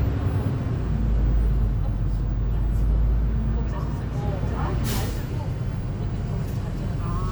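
No technical fault can be heard anywhere in this recording of sounds. There is nothing here to place on a timeline or trace to a cause.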